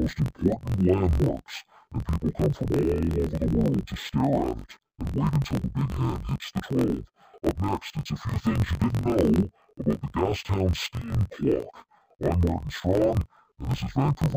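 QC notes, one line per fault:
Throughout, interleaved audio read as planar: each 22 ms block of alternating left-right samples is split into halves played side by side at half speed, so the speech drops an octave, sounds doubled and choppy, and is chopped at the 45.9 Hz block rate.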